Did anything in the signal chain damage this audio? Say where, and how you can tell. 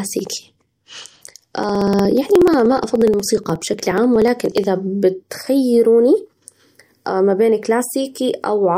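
Yes, at the driver or USB stage. From 0.07 s to about 4.64 s the speech carries a steady train of ticks, one every 60 ms, around seventy in all, then they stop. These are periodic USB or driver dropouts. Something is stalling the bus or the audio driver on a fixed schedule, and each time roughly 4 ms of audio is skipped outright, so the waveform jumps and clicks wherever the speech is sounding.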